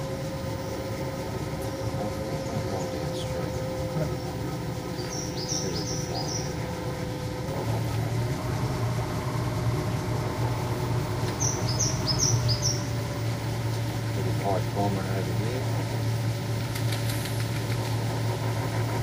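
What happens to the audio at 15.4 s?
Nothing goes wrong at 15.4 s: the sound carries on intact through that moment, with no dropout, click, glitch or other fault to be heard.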